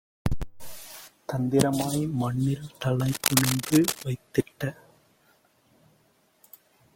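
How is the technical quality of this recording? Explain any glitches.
There's one real glitch, a patch of cable scratch noise running from about 3.00 to 4.03 s. For roughly a second, a dense, ragged rustle sits over the speech, only a few dB below it. It's most likely a worn cable, connector or control being moved. As the contact wobbles, its resistance jumps around rapidly, and those fluctuations ride on the signal as uneven bursts of scratchy noise until things settle again.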